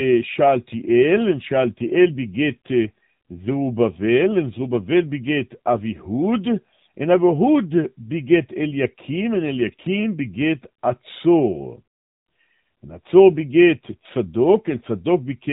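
From start to finish the speech carries AMR narrowband mobile codec damage: nothing passes above about 3.8 kHz, and the vocal-tract model driven by sparse pulses leaves a plainly buzzy, synthetic edge, which points to a low rate around 7.4 kbps.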